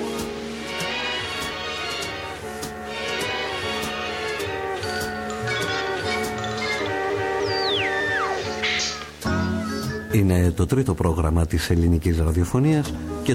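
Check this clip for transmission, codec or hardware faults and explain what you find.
One fault runs through the whole clip: video or display buzz. It is present from start to end. A screen or its video cable is leaking energy into the audio path. The interference follows the display's refresh, so the buzz sits at a 75 Hz field rate. It sounds like a steady, harsh drone with a fizzy hash riding above it. It sits roughly 20 dB below the wanted sound.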